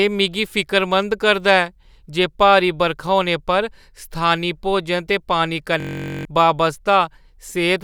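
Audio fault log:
5.80–6.25 s, system hang loop: right after "स्थानी भोजन ते पानी", one 21.33 ms slice repeats exactly 21 times as a steady 46.9 Hz buzz. This fits a 1024-sample buffer cycling while the system froze. Unlike a dropout, sound never stops, yet about half a second is lost.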